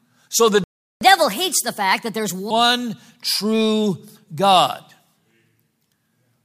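A speech clip in which the sound cuts out abruptly at 0.64 s and stays silent for 0.37 s, resuming at 1.01 s. This playback stall likely comes from the player running short of data or having its output thread blocked, so nothing reached the output until it recovered. From 1.01 s to 2.51 s the speech then runs fast and sounds raised by about four semitones. This is catch-up at higher speed: the player resamples its backlog at 1.25 times normal rate to recover the lost time, then settles back to normal speed and pitch.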